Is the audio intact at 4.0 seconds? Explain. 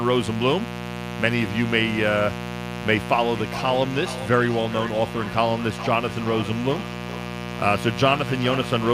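No. Feedback echo between two devices runs from 3.37 s to the end of the clip, covering 4.0 s. Two devices in the same room are on one call, and one plays back what the other's microphone sent. That microphone hears it again, and because each echo canceller removes only its own device's playback, the sound returns roughly every 400 ms. The repeats sound thinner and more ringing, at most about 13 dB below the speech.

Mains buzz, at 60 Hz, runs through the whole clip, so it is present at 4.0 s too. Sharp switching spikes from something like a dimmer, rectifier or missing shield get into the signal twice per mains cycle. They spread harmonics of 60 Hz up to several kHz. The result is a steady, raspy buzz sitting roughly 10 dB below the speech.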